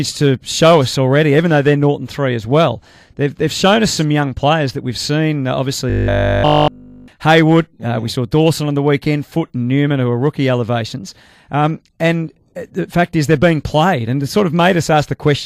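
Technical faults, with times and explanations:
5.90–7.08 s, robotic sound from repeated short buffers: a rigid metallic 50 Hz buzz across the whole span, likely a 20 ms chunk looping while fresh audio was skipped.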